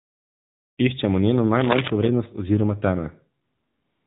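A speech recording carried throughout by the AMR narrowband mobile codec: nothing above 4 kHz survives, and the voice has the plainly audible buzzy, synthetic edge of a low bit rate, consistent with the 7.4 kbps mode. Speech is rebuilt from a vocal-tract model and a sparse pulse excitation, so fine detail and natural breathiness are lost. AMR comfort noise fills the opening 0 to 0.78 s and the stretch from 3.44 s to the end. In both places no speech frames arrive, and the receiver substitutes smooth, steady synthetic noise for the real background. That noise switches in and out at the boundaries and can clip soft word endings. From 1.60 to 1.90 s, dense, irregular scratching and rustling sits over the sound at roughly the same level as the speech. It is cable scratch noise, likely from a worn cable or connector being moved, with the contact resistance jumping rapidly and injecting uneven bursts of noise.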